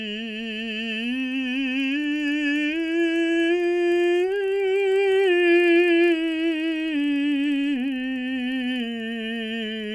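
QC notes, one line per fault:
throughout: resampler restarted on every block. The music carries a steady buzz at 25 Hz, a tick every 40 ms, consistent with a 48 kHz to 24 kHz conversion run block by block. Each block was converted in isolation, so the filter saw no real neighbouring samples at its edges and left a small error at every boundary. On a spectrogram this shows as faint vertical lines at 40 ms spacing. On the waveform there are tiny steps at the same spacing that vanish where the signal is silent.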